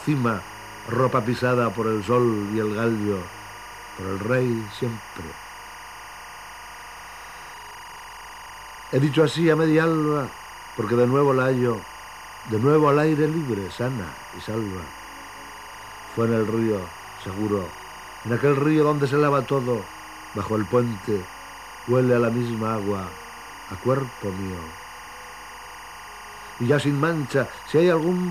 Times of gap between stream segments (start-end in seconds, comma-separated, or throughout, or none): none